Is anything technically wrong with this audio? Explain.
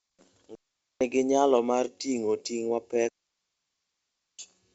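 Yes, there are two digital wireless dropouts, from 0.55 to 1.01 s just before "nyalo mar ting'o ting'" and from 3.09 to 4.39 s right after it. In each, the receiver lost too much data and muted quickly, leaving clean near-silent holes of about 0.46 s and 1.3 s with no noise bursts. The wideband telephone sound is G.722 coding at its best setting, which fits 64 kbit/s.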